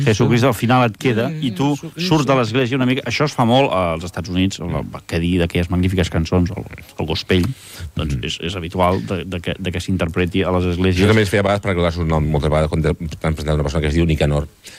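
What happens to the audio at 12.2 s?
Nothing goes wrong at 12.2 s; the audio plays through that moment without any fault.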